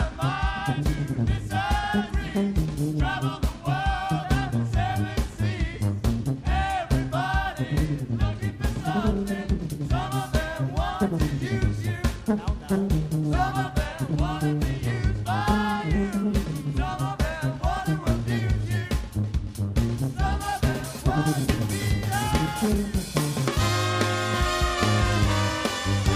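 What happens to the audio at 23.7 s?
At 23.7 s the audio carries sample clock jitter. It starts at 8.44 s and runs to the end of the clip. The converter's timing wanders by a few microseconds, so each sample lands slightly off its proper instant. Steep, fast-changing parts of the waveform suffer most. The result is a fine hiss and roughness, roughly 30 dB below the signal. It grows on loud, bright passages and disappears in silence.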